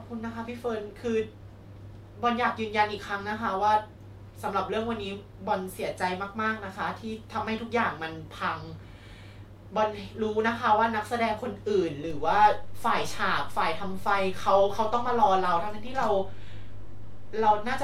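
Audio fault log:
12.1 to 17.8 s: DC step. The waveform's zero line jumps by about -31 dBFS, making a low thump. The offset then holds while the speech carries on unchanged.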